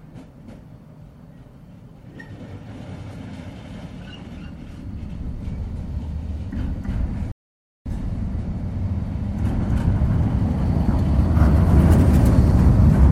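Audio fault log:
7.32–7.86 s rebuffering stall: playback drops to silence for 0.54 s while data refills, then resumes exactly where it stopped, adding time without losing audio.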